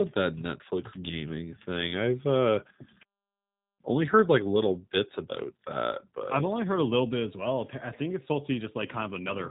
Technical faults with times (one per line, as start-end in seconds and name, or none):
0.00-9.50 G.729 codec